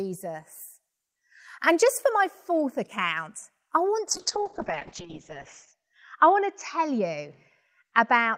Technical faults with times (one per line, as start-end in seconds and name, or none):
4.09-8.37 call bitrate drop